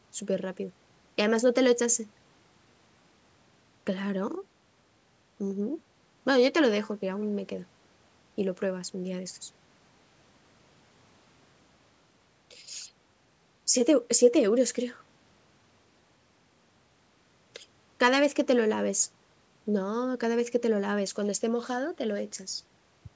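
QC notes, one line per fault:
No faults found.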